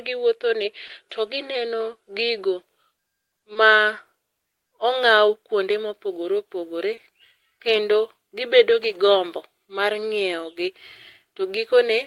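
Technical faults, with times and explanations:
0.87–0.91 s, 3.53–3.57 s, 6.95–6.99 s: short concealed packet loss. Each 20 ms gap is bridged by continuing the previous sound, giving a brief smear rather than silence or a click.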